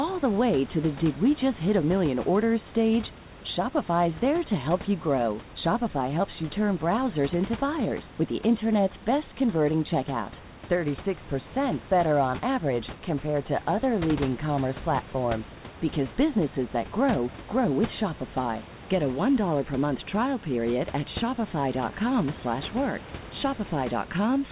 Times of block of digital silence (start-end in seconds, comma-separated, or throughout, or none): none